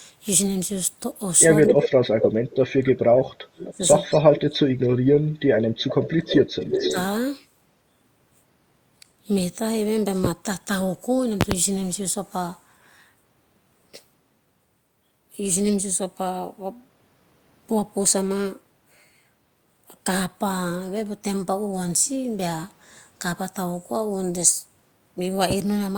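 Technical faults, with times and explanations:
1.67–1.86, 2.21–2.28, 4.15–4.19, 4.85–4.89, 5.77–6.16 and 6.73–6.95 s, echo leak: a repeat of the speech trails the original by about 250 ms at first, drifting to about 280 ms. Early scraps are about as loud as the speech, and later ones range from about 5 to 35 dB below. This is likely a far-end loudspeaker echo the canceller failed to remove. The distinct lag and repeated phrasing set it apart from room reverberation.
1.68–4.81 and 6.19–6.96 s, speech suppressed in double talk: while both sides talk at once, the speech dips by up to about 35 dB for roughly three seconds in the first stretch and less than a second in the second. The likely cause is an echo canceller that could not separate the talker from the returned echo and turned both down. The sound thins and drops out in pieces rather than repeating, unlike the leak.
10.25–10.28, 11.41–11.55 and 25.51–25.54 s, loud pop: single sharp pops at the first and last times, and a close pair in the middle, stand about 15 to 25 dB above the speech, which continues underneath. 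The likely cause is a voltage step or pulse, such as a plug, switch, static or driver glitch, shaped into a brief thump. Being an isolated transient, it differs from a dropout or clipping.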